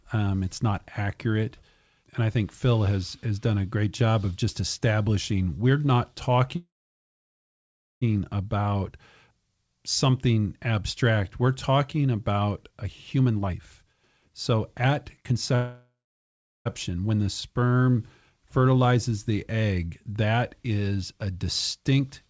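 Call audio freeze at 6.56–8.03 s, right after "just establishing we're not": the sound stops, with a brief fading tail and then about 1.34 s of silence, before resuming where it left off. The likely cause is delayed packets draining the jitter buffer, so a 1.46 s gap is inserted and nothing is lost.

Jitter buffer speed-up at 12.71–15.54 s, after "abstract we're talking about": the buffer had built up excess delay, so the receiver trimmed small pitch-period slices repeatedly. The speech runs at about 122% speed with unchanged pitch and sounds rushed, shedding roughly 0.7 s.

A second call audio freeze follows at 15.55–16.67 s, a 1.1 s hold with about 0.73 s of silence, again likely from held-up packets.

Another jitter buffer speed-up runs at 16.89–17.18 s, at about 114% speed and removing roughly 50 ms.

Jitter buffer slow-down at 17.23–17.78 s: single pitch periods were repeated to build a reserve, adding 47 ms. 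Speech drags slightly at about 93% speed while keeping its pitch.

A final jitter buffer speed-up at 21.77–22.29 s, after "egg that is a", runs at about 109% speed. Throughout, nothing is heard above 8 kHz, which fits a wideband call codec.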